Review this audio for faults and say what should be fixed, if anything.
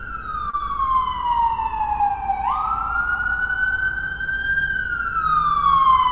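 A short stall from a late packet runs from 0.50 to 0.55 s. A packet arrived late, the jitter buffer ran dry, and the last sound was held for about 34 ms before playback resumed where it left off. This shows as a smeared, repeated stretch in the waveform and flat horizontal bands on a spectrogram. A slightly deeper jitter buffer or steadier network timing would prevent this stall.

Short concealed packet loss follows at 0.57 to 0.62 s. About 20 ms of audio never arrived, so the receiver extrapolated the preceding sound to bridge the gap. On a spectrogram this appears as a blurred patch, and on the waveform as a brief smeared stretch. Reducing packet loss on the link, or adding forward error correction, would prevent this gap.

Throughout the clip, the G.711 A-law call path leaves the spectrogram empty above 4 kHz.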